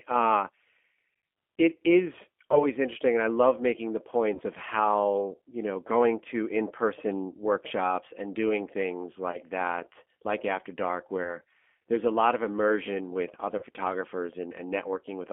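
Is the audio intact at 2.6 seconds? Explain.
No. Around 2.52 to 2.66 s, a gap of about 20 ms, which points to a single lost VoIP packet, was covered by the speech codec's packet loss concealment. The decoder stretched its last pitch and filter with falling gain, so the speech turns briefly into a fading buzzy tone or coloured noise, and it stays weakened until about 2.66 s as later frames rebuild from that guess. Underneath, the G.729 codec is plainly audible, with rough, synthetic-sounding speech consistent with an 8 kbit/s coder, confined to about 250 Hz to 3.4 kHz.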